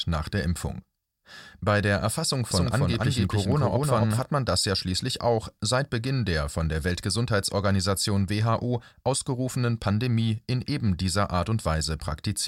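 From 2.51 to 4.19 s there's a doubled audio track: an equally loud copy trails about a third of a second behind, likely from a second capture path, ending abruptly before "hat man das ja".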